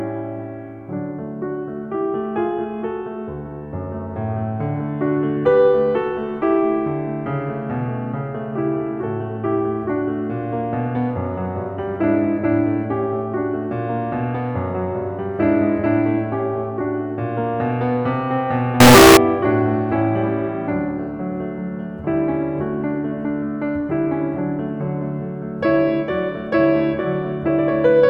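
From 18.80 to 19.17 s the music turns into a loud, harsh, almost square-edged blast at an almost fixed, high level, with background noise pushed up to match the music itself, though the pitch stays traceable. This is likely a float read as integer: 32-bit float samples interpreted as 32-bit integers, so sign and exponent bits set the level. Unlike ordinary clipping, quiet passages jump just as loud as peaks.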